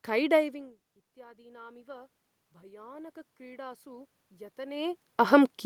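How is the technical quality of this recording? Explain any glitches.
One glitch stands out: automatic gain rising, from 0.97 s to 5.26 s. After the input level fell by about 24 dB, the gain control judged the signal too quiet and slowly raised its gain by about 11 dB over those four seconds. The speech creeps back up in level, and what gives it away is the room noise swelling right along with it. When a talker simply moves, as happens around 0.5 s and 4.5 s, the voice changes but the background stays put.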